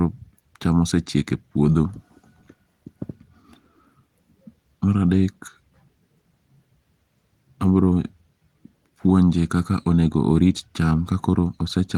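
There are no technical faults to describe in time order anywhere in this speech.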